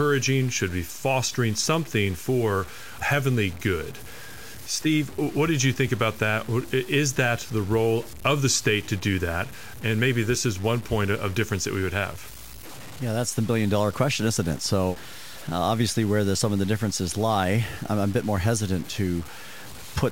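A speech clip with low bit depth without dither running through its whole length. Grainy distortion rides on the voice and changes with it. Quiet passages turn gritty. The softest sounds sputter or drop to silence. The error sits roughly 20 dB below the signal, which is very high. It fits audio likely truncated to about 6 bits with no dither. The rounding error then tracks the signal instead of forming a steady hiss.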